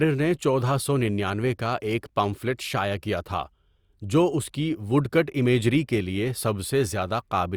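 A speech recording with no audible technical faults.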